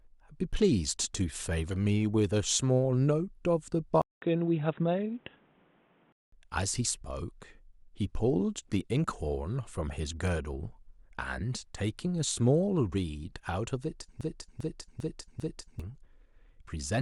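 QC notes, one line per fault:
4.02–6.32 s, input switched to a poorer device: After a 200 ms gap, the speech suddenly turns dull and boxy, with nothing above 3.8 kHz, and a faint new background noise appears well below the speech. The level stays about the same, so the change is in tone and band rather than loudness. The likely cause is the recording moving to another microphone or a headset's call profile, whose narrower band strips the upper range.
14.21–15.80 s, broken-record loop: A 0.40 s piece of speech plays four times back to back, identical each time, so the same fragment stutters instead of the speech moving on. The likely cause is the playback, encoding or streaming path stalling and re-sending the last fragment it held. Whatever speech should have filled that stretch is lost, and the sound resumes afterwards.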